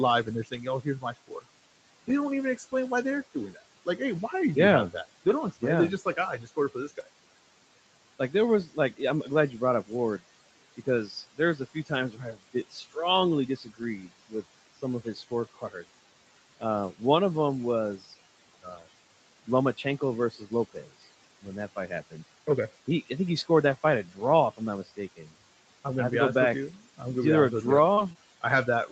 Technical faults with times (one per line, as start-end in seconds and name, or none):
0.00-28.91 noise suppressor artifacts
0.25-7.07 speech cut by the noise suppressor
8.19-17.01 speech cut by the noise suppressor
17.98-25.29 speech cut by the noise suppressor
27.93-28.17 short concealed packet loss
27.97-28.11 lost packet rebuilt from error correction